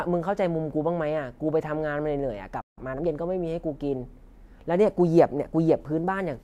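At 2.61 s the speech cuts out in mid-flow. Silence holds for about 0.16 s, until 2.78 s. This is a playback stall. The likely cause is the player running short of data or its thread being held up, leaving the output empty.

From 2.78 s to 3.08 s comes time-compressed catch-up. The player trims its backlog by removing small slices and cross-fading the joins. The speech runs at 1.5 times normal speed. Pitch stays put.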